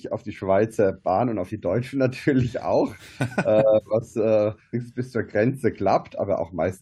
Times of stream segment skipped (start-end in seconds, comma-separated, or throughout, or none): 4.73